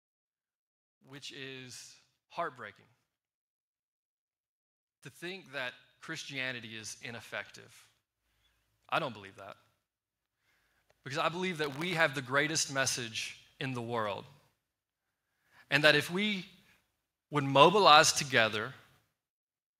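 Speech recording with two episodes of automatic gain rising: from 5.19 to 7.6 s the level climbs by about 5 dB, and from 10.9 to 14.27 s by about 6 dB. Each time the gain control slowly boosts quiet input, lifting voice and background noise together.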